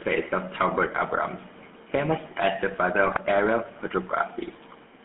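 It's a short speech clip, and the whole thing has gone through the GSM full-rate codec. The band sits between roughly 200 Hz and 3.5 kHz, and the voice has that buzzy, gravelly texture from the coarse pulse excitation, which fits the old 13 kbps full-rate coder. The damage is plainly audible. Then from 3.06 to 3.19 s there's a burst of GSM bit errors: the sound breaks into squawking and gargling as corrupted filter, pitch and gain values throw a handful of decoded frames off, which points to a noisy radio link.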